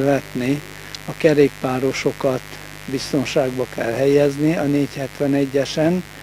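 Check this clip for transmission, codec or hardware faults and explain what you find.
There is one fault, mains buzz, running through the whole clip. Sharp switching spikes from a dimmer, rectifier or poor shielding enter twice per 50 Hz cycle. Their harmonics climb into the kilohertz range. The result is a steady, raspy buzz, roughly 20 dB below the sound.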